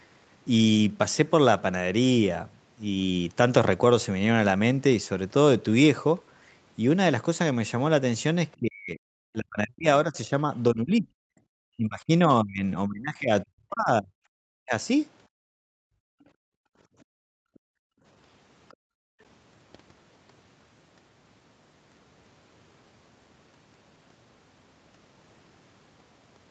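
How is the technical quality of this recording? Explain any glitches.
The recording has several echo-canceller glitches between 8.57 and 19.2 s. The audio is band-limited to 8 kHz, which points to a wideband call codec at a modest bitrate.

Speech suppressed in double talk, from 8.57 to 11.35 s, 11.76 to 14.11 s, and briefly from 14.54 to 14.74 s. The speech sinks by up to roughly 40 dB, in patches and sometimes to near silence. The likely cause is the canceller mistaking both talkers for echo and ducking everything.

Background gated by the echo canceller, from 15.27 to 18.04 s and again from 18.74 to 19.2 s. The room sound drops by about 40 dB, then returns. The canceller clamped the microphone hard while the far end played.

The other side's voice leaks through at 18.7 s as a tiny scrap, roughly 35 dB below the speech. It is faint and clipped short. It is likely echo the canceller failed to remove before gating took over.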